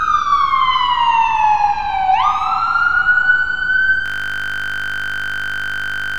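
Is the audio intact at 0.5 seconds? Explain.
Yes, the sound at 0.5 seconds plays through cleanly, with no dropout, click, distortion or other fault at that moment.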